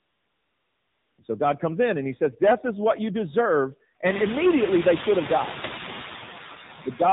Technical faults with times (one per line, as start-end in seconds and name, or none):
0.00-7.13 noise suppressor artifacts
0.00-7.13 AMR narrowband mobile codec
0.00-1.18 AMR comfort noise